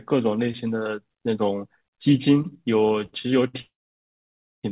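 It's a speech recording over a narrowband call line with nothing above 4 kHz. From 2.88 to 3.56 s there's a repeated stall, or stutter: five short gaps, the longest 67 ms, patched by stretching the last sound, so it drags without losing anything. Then from 3.62 to 4.65 s there's a call audio freeze, about a second of filled time, mostly silence, likely from packets held up and the jitter buffer running dry before the sound picks up where it left off.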